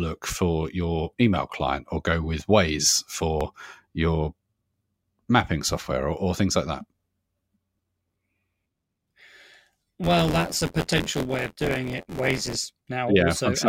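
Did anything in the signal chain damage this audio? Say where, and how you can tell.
Yes, at the driver or buffer stage, where buffer tearing sets in from 10.03 to 12.55 s. The application writing the ring buffer and the hardware reading it drifted out of step, so their positions crossed inside every period. About a fifth of each buffer replays audio roughly 20 ms stale, with hard splices at both edges. That gives the speech a rattling, robotic 86.1 Hz buzz, a rate that fits a 512-sample buffer.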